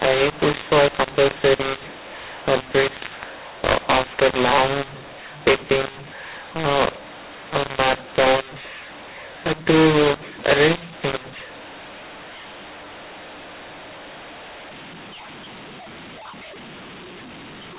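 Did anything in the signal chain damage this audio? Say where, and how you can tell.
Yes. This is a mu-law and A-law mix-up at the codec decode stage: the speech was coded as mu-law but read back as A-law for the whole clip. That scrambles levels, so it sounds harsh and gritty throughout, and pauses fill with noise because near-silent samples get lifted. The 8 kHz telephone coding itself is intact.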